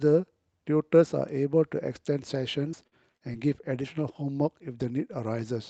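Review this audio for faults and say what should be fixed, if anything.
From 2.71 to 3.36 s there's repeated packet loss, giving that robotic sound: four short holes, the longest 42 ms, about 120 ms missing in total. The receiver patched 108 ms of that by stretching the last bit of sound, so about 17% of the stretch is concealment, and it comes out choppy with pieces missing. The Opus path caps the top at 8 kHz. To prevent it, turn on Opus in-band FEC and give the jitter buffer more headroom on lossy links.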